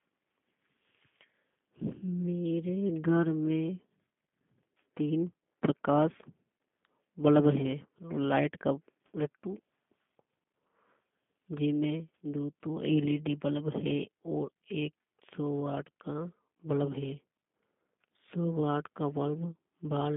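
G.729 codec damage runs through the whole clip. The speech is resynthesised from a short-term spectral filter, a pitch predictor and a few sparse pulses per frame, which fits an 8 kbit/s G.729A link. Only 150 Hz to 3.5 kHz survives, so it sounds narrow, slightly rough and synthetic.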